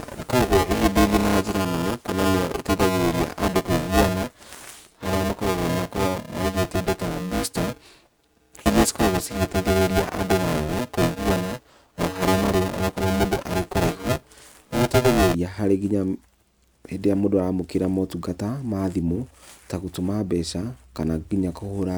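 From 0.0 to 15.35 s the speech carries buffer tearing: writer and reader cross inside each period, so roughly half of every buffer repeats audio about 5 ms old. A 375 Hz robotic buzz results, fitting a 128-sample buffer, seen as regular spectrogram striations and periodic waveform seams.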